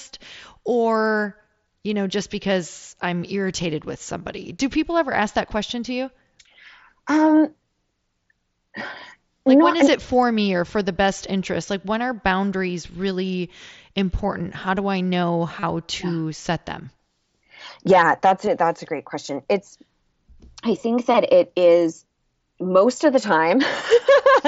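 Concealed Bluetooth headset packet loss occurs at 7.36 s, 15.60 s and 18.46 s. Lost headset audio was filled by repeating recent waveform. The single brief gaps pass almost unheard. The 30 ms run after "do I know", before "to yeah set them", gives a short buzzy hold and slight warble.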